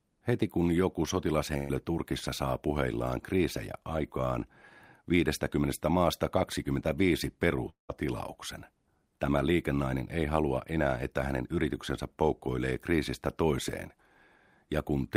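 At 1.57 s the speech breaks for about 0.14 s in a burst of packet loss. A short run of packets never arrived in time, so the receiver stretched the last sound for about 120 ms and faded it, producing a brief buzz or hiss rather than silence. Speech resumes at 1.71 s with about 120 ms of the original skipped. The gap is fully covered by that fill, which sets it apart from a dropout.

At 7.69 s a longer interruption begins and runs to 7.91 s. The last sound is again extended and faded, but here the fill runs out and about 130 ms of true silence follows before speech returns, with about 200 ms of material gone. That silent stretch after the fading tail is what marks this as a long network dropout rather than a brief burst, most likely a longer stall in delivery.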